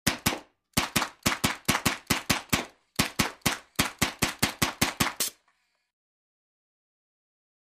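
Nothing in the audio stood out as a technical problem on listening.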